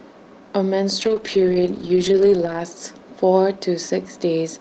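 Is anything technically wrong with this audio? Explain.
Yes, there is a call bitrate drop from 1.02 to 2.99 s. The call's bandwidth estimate fell, forcing the encoder from 32 down to 8 kbps for about 1.6 s, so the speech turns coarse, rough and muffled.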